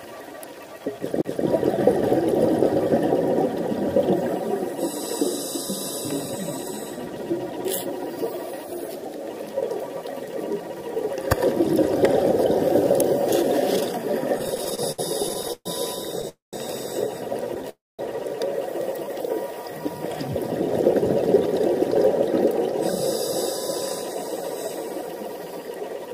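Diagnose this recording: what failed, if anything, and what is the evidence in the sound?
Playback stage: a CD skip at 1.22 to 1.25 s, a tick and a very brief mute, then the laser resumes on a different turn of the spiral.

Network and jitter buffer: repeated stalls (stutter) from 14.38 to 16.25 s. Sixteen gaps, 344 ms filled in all, the longest 130 ms. Late packets kept starving the buffer, so it drags without losing anything.

Call audio freezes at 16.29 to 16.55 s and 17.69 to 18.01 s: the last sound is stretched, fades, and goes silent for 140 ms and 210 ms, likely from packets held up in transit.

Jitter buffer speed-up from 24.24 s to the end: it runs at 105% with unchanged pitch, as pitch-period chunks get trimmed to shrink the built-up delay.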